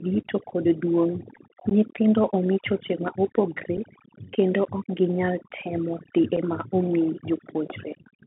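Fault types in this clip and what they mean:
Overdone noise removal: A noise reducer set too hard cuts any frequency band close to its noise estimate, taking quiet speech detail with it. The background drops to near silence with twinkling specks. On a spectrogram it shows as scattered isolated blobs on a blank floor, with ragged, thinned speech harmonics.
Bluetooth CVSD headset codec: The speech passes through a narrowband one-bit delta coder, consistent with a 64 kbit/s CVSD headset link, confined to roughly 150 Hz to 3.4 kHz. S sounds turn scratchy and a granular hiss sits underneath. A spectrogram shows a hard ceiling near 3.4 kHz with grainy noise across the band.
Unconcealed Bluetooth headset packet loss: Lost headset packets leave short, abrupt gaps with nothing filled in: 15 ms at about 1.70 s, and 7.5 ms each at 3.77 s and 6.36 s, matching about one or two packets. The waveform shows flat notches with hard edges, and the spectrogram shows thin vertical blank stripes.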